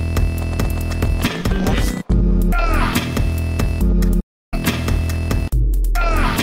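At 4.2 s the sound fades out within about 8 ms and stays silent until 4.54 s, a gap of about 320 ms, consistent with roughly ten lost frames. This is a digital broadcast dropout: the receiver stopped getting valid frames and muted until good ones resumed.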